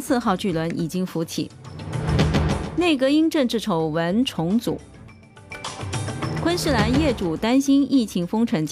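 No technical faults can be heard anywhere in the audio.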